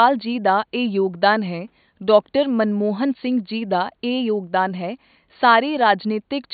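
No technical faults can be heard in the speech. Some room noise sits in the background, about 53 dB below the speech.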